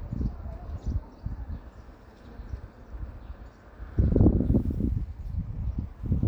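No technical faults are audible.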